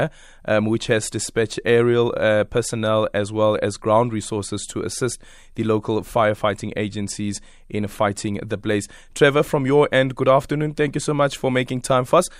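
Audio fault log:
No fault is heard in this speech clip.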